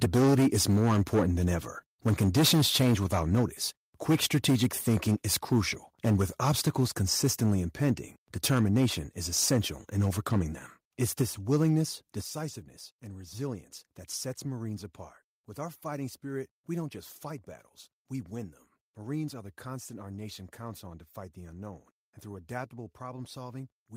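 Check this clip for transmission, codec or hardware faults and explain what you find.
Two hardware-side faults are audible, both on the capture side. Microphone overload occurs at 0.01–1.54 s, 2.06–3.43 s, 4.09–7.91 s and 8.44–10.4 s. Peaks exceed the converter's ceiling by about 10, 12, 8 and 7 dB, most likely from excessive input volume. Roughly a fifth of samples are flattened early on, fewer later, giving a harsh, crackling edge to loud syllables. A microphone volume step-down occurs at 0.04 s (about 2 dB) and 12.21 s (about 9 dB), where the input gain is likely cut abruptly. Level and background fall together in one sudden drop.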